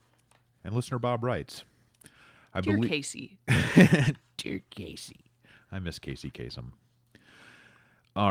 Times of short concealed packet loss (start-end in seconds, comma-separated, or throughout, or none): none